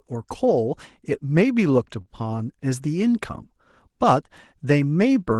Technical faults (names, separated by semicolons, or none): short stall from a late packet